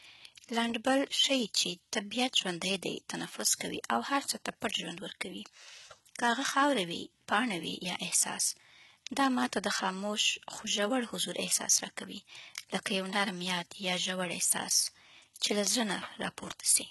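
From start to finish the speech carries a gritty, metallic sheen on its sibilants. S sounds come out lispy and smeared rather than crisp, and the treble sounds bright but synthetic, with nothing at all above 11.8 kHz. This is likely HE-AAC compression under heavy strain. The upper band is rebuilt by copying lower frequencies upward rather than coded directly, so its harmonics misalign with the real ones. The degree of damage points to a very low bitrate, around 16 kbps.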